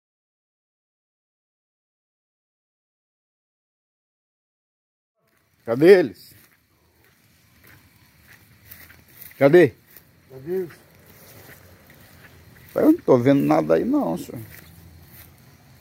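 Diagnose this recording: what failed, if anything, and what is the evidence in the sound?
Nothing failed; no stage shows any audible defect.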